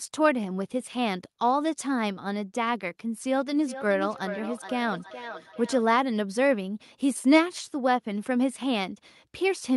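Speech recording with feedback echo between two devices from 3.52 to 5.95 s. The speech returns at a steady spacing of roughly 0.4 s, peaking about 13 dB below the speech. Room reverberation leaves a smooth tail. This fixed delay points to a nearby device replaying the call into the microphone.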